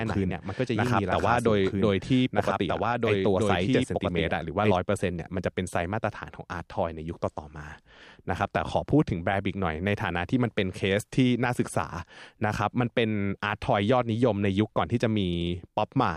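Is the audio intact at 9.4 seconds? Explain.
Yes, the audio is intact at 9.4 seconds, with no fault audible at that moment.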